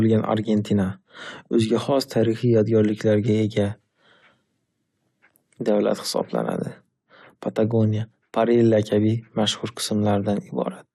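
No technical faults can be heard anywhere in the recording. The speech runs from beginning to end with nothing that stands out as a fault.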